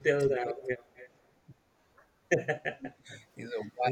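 From 0.0 to 0.7 s the speech sinks by roughly 25 dB, likely speech suppressed in double talk: the echo canceller muted the talker along with the far side. Overlapping from 0.58 to 1.1 s, a faint copy of the voice trails about 244 ms behind, some 20 dB down, likely an echo leak where the canceller let loudspeaker pickup return. The same suppression likely strikes again, briefly dipping the voice about 20 dB from 1.45 to 1.58 s, then cutting it nearly away, around 40 dB down, from 2.53 to 3.1 s.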